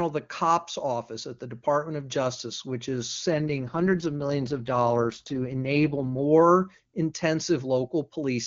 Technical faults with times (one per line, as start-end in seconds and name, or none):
3.32-6.21 AMR rate drop